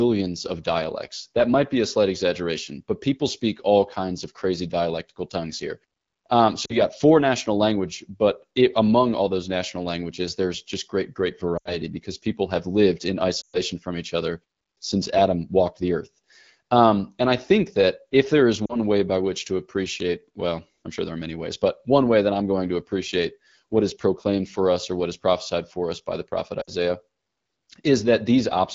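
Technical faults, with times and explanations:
6.65–6.82, 11.57–11.77, 13.42–13.58, 18.66–18.77 and 26.62–26.71 s, lost AMR speech frames: each time a short run of frames drops out, the decoder keeps repeating the last good pitch and vocal tract settings with fading gain, so the sound drops to near silence within two frames before the speech comes back weak or rough for a moment.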